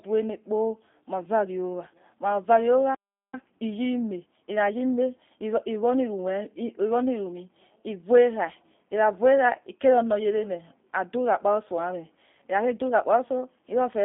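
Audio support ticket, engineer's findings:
G.729 codec, throughout. Band-limited to roughly 200 Hz to 3.6 kHz, nothing above 3.6 kHz. Plainly audible rough, synthetic texture on the speech, consistent with G.729 at 8 kbit/s: per-frame filter-plus-pulse reconstruction rather than the original waveform.

Playback stall, 2.95 to 3.34 s. Speech cuts out mid-flow to silence for about 390 ms, then resumes. Likely player buffer underrun or blocked audio thread; output starved of samples until data arrived.

Time-compressed catch-up, 3.34 to 6.34 s. Speech hurried at about 1.1x, pitch unchanged. Player draining the backlog built up during the stall by cutting small segments and cross-fading the joins until back on schedule.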